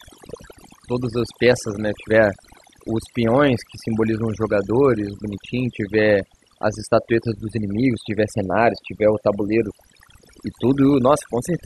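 Overdone noise removal runs through the whole of this speech clip. A noise reduction stage was pushed too hard on a noisy source, so frequency bands sitting close to its noise estimate are pulled far down or switched off entirely, taking the quieter parts of the voice with them. Between phrases the background drops and breaks up into twinkling specks.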